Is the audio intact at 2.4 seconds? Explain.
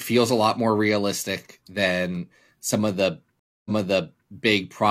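Yes, the speech at 2.4 seconds is intact, with no audible fault at that moment.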